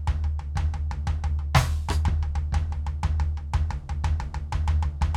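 Music, with no audible technical faults anywhere.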